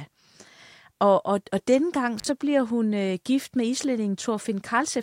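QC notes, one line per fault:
2.18–2.26 s, intermittent contact: right after "og og denne gang" the speech drops out for about 44 ms, with a crackle as it cuts and another as it returns before "bliver hun øh gift". Faint hiss remains in the gap. A loose plug or cable connection briefly lost contact, breaking the signal path. The scratchy metal contacts produced the clicks at each edge, and the line carried nothing but background noise while it was open.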